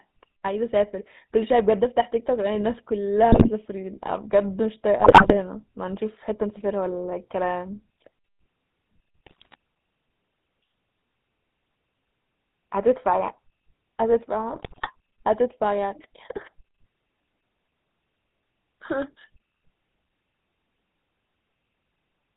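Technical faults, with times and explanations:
Throughout: GSM full-rate codec. The sound is buzzy and gravelly with nothing above 4 kHz, which fits pulse-excited vocal-tract coding at 13 kbps.
3.32–3.49 s, 4.98–5.37 s, 9.26–9.55 s, 14.52–14.90 s: GSM bit errors. Corrupted filter, pitch and gain values make the speech squawk, pop and gargle in each burst.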